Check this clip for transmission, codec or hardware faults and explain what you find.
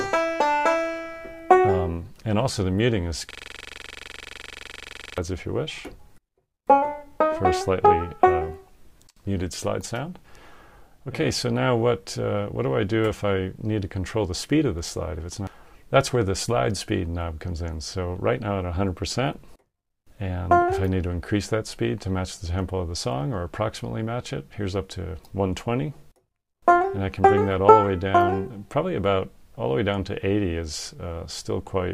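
One fault stands out, a system hang loop running from 3.31 s to 5.18 s. Across that stretch the audio turns into a hard, rapid stutter verging on a buzz, pulsing at about 23.4 Hz as one 42.67 ms fragment repeats exactly, some 44 times, before normal playback returns. The host or driver stalled while the sound hardware kept replaying the same ring buffer, and the loop length fits a 2048-sample buffer.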